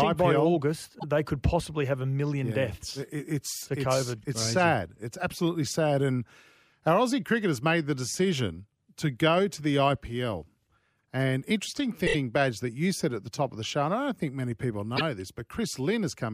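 Just before "they could possibly have", at about 0.98 s, and at 14.96 s after "don't think many people", a single 26 ms frame plays twice, a quick stutter. At 12.06 s it loops three extra times, adding about 78 ms. These are repeated frames: compressed data sent or written again.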